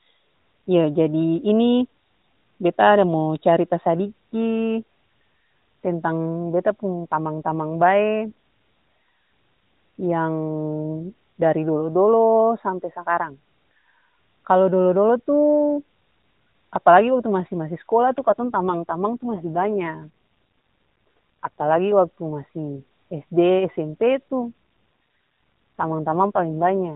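From 18.18 to 21.79 s, ending just before "waktu masi sd", and again from 24.40 s to the end, an AMR rate drop makes the speech rougher and buzzier, consistent with the narrowband AMR-NB link falling from 12.2 to about 5.9 kbps. The band stays the same and nothing drops out, unlike packet loss or a bandwidth cut.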